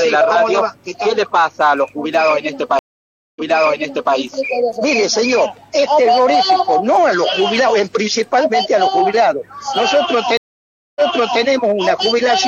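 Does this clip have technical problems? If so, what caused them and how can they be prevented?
Yes. Two stream reconnects occur. At 2.79 s the audio drops to silence for about 0.57 s, and playback then resumes 0.79 s earlier than where it broke off, so a stretch already heard repeats until 4.15 s. At 10.37 s the same happens: 0.59 s of silence, then a restart 0.46 s back, ending at 11.42 s. Each time the connection failed, the player reopened the stream, the server resent a buffered burst, and a fresh decoder started mid-stream with its first frame faded in. A larger client buffer with seamless resume from the last received position would prevent this.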